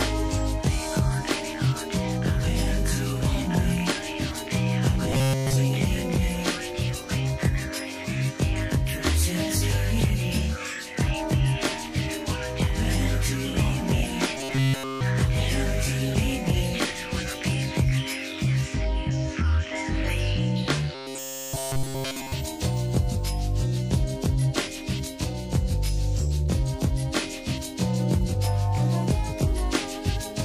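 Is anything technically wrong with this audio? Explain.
Yes. Robotic sound from repeated short buffers occurs at 5.12–5.57 s, 14.38–15.01 s and 20.95–22.32 s. Essentially all the audio there becomes a rigid metallic buzz at 133 Hz, likely from a 7.5 ms chunk looped while new audio was skipped. Unlike dropouts, no silence appears.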